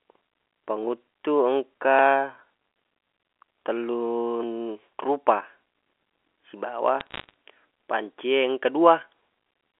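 Bit errors on a digital phone line put a burst of crackle into the speech from 7.00 to 7.30 s. Each flipped bit corrupts one G.711 mu-law sample, and hits on the sign or high bits produce sharp ticks, pointing to around two errors per thousand bits.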